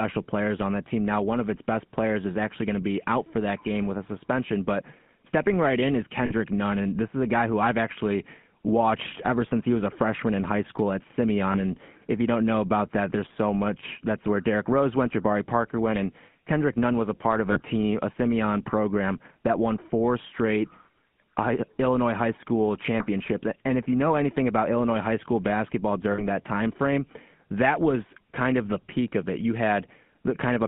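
Speech heard through the GSM full-rate codec, band-limited to roughly 150 Hz to 3.4 kHz, with a buzzy, gravelly roughness throughout that fits the 13 kbps full-rate coder. That texture separates it from a plain telephone band filter, which would sound muffled but smooth. Lost GSM frames occur at 6.26 to 6.32 s, 11.52 to 11.60 s, 17.52 to 17.60 s and 26.12 to 26.22 s, lasting about 40, 20, 40 and 60 ms. Each is a brief metallic ring where the last good frame is repeated, not the clean silent gap of a dropout.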